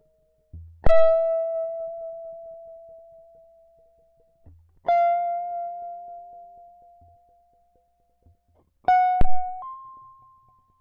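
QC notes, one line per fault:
0.87–1.19 s and 9.21–9.49 s, phantom power thumps: a supply switched on or off on a live input pushes a voltage step through the coupling capacitors, giving a deep thud that dies away in about 72 ms and 62 ms. The waveform shows a large low-frequency swing; the spectrogram shows a bright burst at the bottom.
9.62–10.81 s, section at the wrong speed: the music runs 1.43 times faster, so tempo rises and pitch jumps about seven semitones, hurried and bright. This was likely caused by playback against the wrong clock. The spectrogram shows harmonics shifted upward with tighter event spacing.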